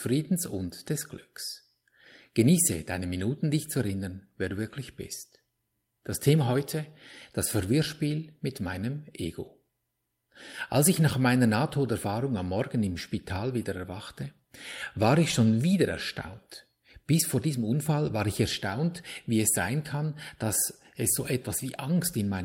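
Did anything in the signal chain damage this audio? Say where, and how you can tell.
Yes, at the network stage: a lost packet rebuilt from error correction, at 3.87, 9.45 and 13.61 s. Each time, 20 ms of speech was replaced by a low-bitrate backup copy carried in the next packet, so there's no gap, only a brief rougher, noisier patch.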